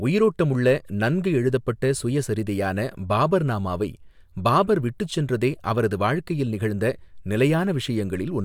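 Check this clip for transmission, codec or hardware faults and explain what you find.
No transmission, codec or hardware faults can be heard anywhere in the recording, and the speech signal stays continuous and stable throughout.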